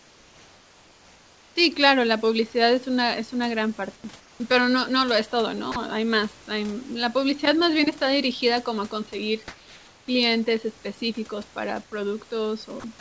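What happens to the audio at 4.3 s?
From 4.20 to 4.40 s the real room background drops out and a steady, featureless hiss takes its place for 200 ms, about 4 dB quieter than the surrounding room noise. This is likely comfort noise in place of the background: the sender stopped transmitting during the pause, and the receiver filled the gap with synthetic noise roughly matched to the room's spectrum. Unlike a dropout or a noise gate, the gap never goes silent.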